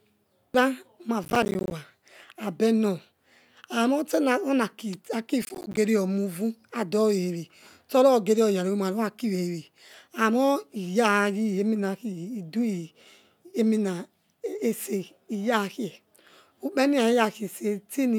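Processor overload crackle tears through the speech from 1.24 to 1.72 s and again from 5.42 to 5.77 s. Missed processing deadlines leave a run of silent gaps roughly 10 ms long, heard as gritty crackle. The waveform shows repeated flat dropouts, and the spectrogram shows dense broadband vertical streaks at their hard edges.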